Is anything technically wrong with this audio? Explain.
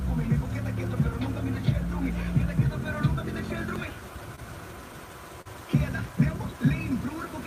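Yes. There is short concealed packet loss at 4.35 to 4.39 s and 5.41 to 5.47 s. About 20 ms and then 40 ms of audio missed the decoder, which extended the preceding sound to fill each gap, so each spot carries a brief smear or wobble.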